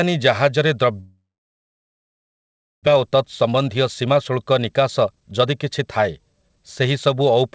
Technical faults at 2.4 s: long network dropout

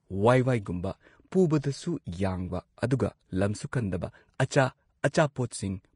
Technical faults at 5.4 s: Vorbis compression

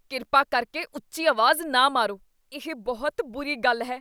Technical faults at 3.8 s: none

